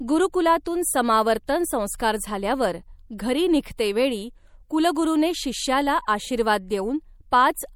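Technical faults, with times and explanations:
Throughout: MP3 compression. The speech has a plainly audible watery, swirling quality, with metallic chirping on sibilants. This is likely the result of an encoder starving some of its frequency lines of bits, so that weak components drop in and out from frame to frame. The damage level fits a bitrate around 64 kbps. The treble is cut at 20 kHz, which suggests the swirl comes from discarded detail rather than a lowered bandwidth.
3.77 s: pre-echo. A short burst of hiss, spread over about 15 ms, leads into a sharp attack and softens its onset. The transform codec spreads quantisation noise evenly across each block. When a transient lands late in the block, noise sized for the loud attack also fills the quiet stretch just before it. That is heard as hiss arriving ahead of the sound it belongs to.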